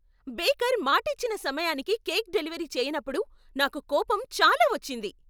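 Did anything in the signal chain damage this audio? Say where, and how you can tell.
No, nothing in the signal chain stood out as damaging this audio on listening.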